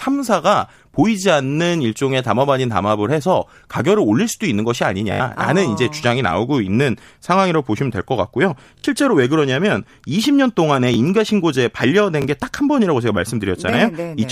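Repeated buffers at 5.12–5.2, 8.78–8.84, 10.94–10.96 and 12.22–12.24 s: audio arrived late, so a short slice, consistent with a 20 ms buffer, replays with hard joins, heard as brief stutters or buzzes.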